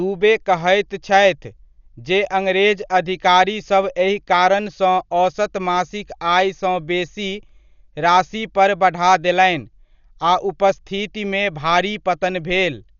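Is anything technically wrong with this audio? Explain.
Yes. Throughout the speech there is heavy coding damage, likely from Dolby Digital compression at a bitrate around 48 kbps. The encoder has cut the band, leaving nothing above 7 kHz, and unfunded frequency lines are filled with dither noise, so the sound is dull, with rough, fluttering noise around tonal parts.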